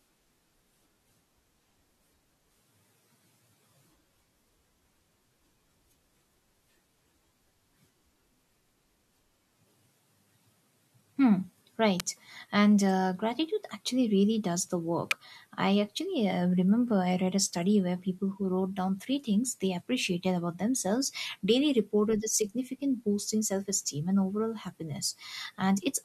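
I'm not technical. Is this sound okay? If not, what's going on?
No. There are two sharp snaps laid over the speech, one at 12.00 s and another at 15.11 s, just after "actually really does the" and before "I actually uh". Each lasts only a few thousandths of a second. This is an electrical switching spike, most likely from a nearby switch, motor or static discharge sparking briefly, with the recording line picking up that burst of electrical noise as a click on top of the speech.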